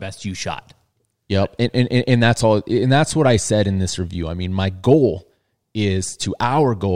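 No technical faults can be heard anywhere in the speech.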